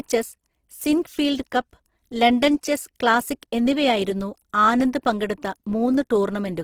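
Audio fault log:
throughout Opus compression: the speech sounds grainy and rough, with noise-like texture filling the upper bands rather than swirling holes as MP3 would leave. The full bandwidth is kept, which points to music-mode operation at a low rate around 16 kbps, likely the cause.
0.11 to 2.12 s periodic USB or driver dropouts: about five ticks, spaced exactly 0.5 s apart, each where a tiny sliver of well under a millisecond is skipped rather than silenced. The strict regular spacing marks a blocked bus or driver, not random clicks.
2.61 s and 3.42 s pre-echo: a short hiss is smeared ahead of each sharp onset, spreading about 19 ms before the first and about 10 ms before the second. This is codec noise sized for the attack filling the quiet moment before it, so it is not a dropout tick.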